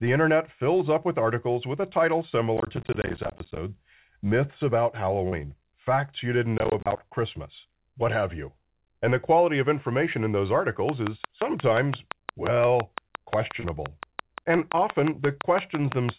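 From 2.57 to 3.57 s, and again from 6.58 to 7.00 s, processor overload crackle tears through the speech. The processor misses buffer deadlines in rapid succession, and each miss leaves a short silent hole that fits 10 ms buffers. The waveform shows dense notches, and the spectrogram shows vertical broadband streaks.

At 5.28 to 5.35 s and 13.60 to 13.67 s, short concealed packet loss removes about 40 ms each time. The decoder patches the gap by extending the preceding sound, which produces a brief smear. On the spectrogram, the sound blurs briefly before the real audio resumes.

From 10.89 s to the end, a train of clicks ticks at a steady 5.77 per second, about 20 dB above the speech, likely from electrical interference. The clicks appear as evenly spaced spikes in the waveform and as thin vertical lines reaching the 4 kHz ceiling of the call codec.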